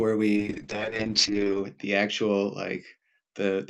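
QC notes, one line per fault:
0.36 s to end: call bitrate drop. Coarser coding sounds rough and watery, fitting a fall to around 8 kbps. Highs above 8 kHz vanish, muffling the speech.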